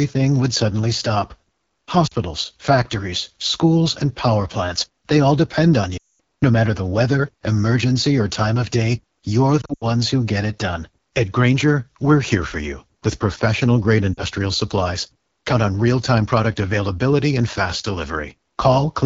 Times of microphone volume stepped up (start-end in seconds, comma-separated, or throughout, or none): none